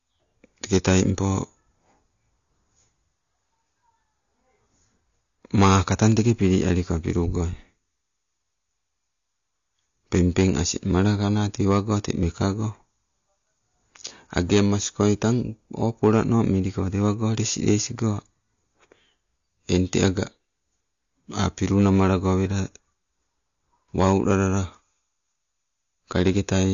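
AAC compression runs through the whole speech recording, and the damage is plainly audible. Nothing is present above 7 kHz, so the top of the spectrum is cut away. The likely cause is AAC-LC coding at a low bitrate, which fits something around 32 kbps. At that rate the encoder lowers its cut-off and quantises the remaining frequency lines coarsely against its hearing model, either leaving gaps in the spectrum or filling bands with substitute noise, which dulls and smears the sound.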